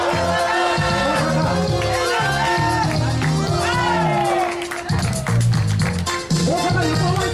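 At about 3.47 s there's a brief chunks-out-of-order glitch: a roughly 5.8 ms slice of sound turns up one chunk late, swapping places with its neighbour. Nothing's missing, but the three hard joins make a tiny jumbled stutter.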